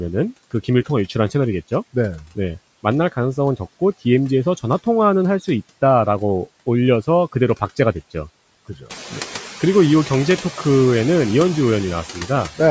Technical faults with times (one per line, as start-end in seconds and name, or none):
0.00-12.71 noise suppressor artifacts
12.13-12.30 speech cut by the noise suppressor